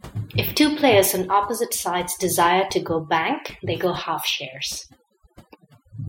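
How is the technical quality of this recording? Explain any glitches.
The recording is marred by one fault that runs for its whole length: overdone noise removal. Between phrases the background drops and breaks up into twinkling, warbling specks. The cause is a noise reduction stage pushed too hard on a noisy source. Any frequency band close to the tool's noise estimate gets cut deeply or muted outright, so the quieter parts of the speech are stripped away with the noise.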